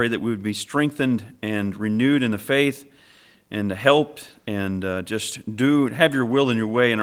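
No dropouts, clipping, glitches or other technical faults are audible anywhere in the recording.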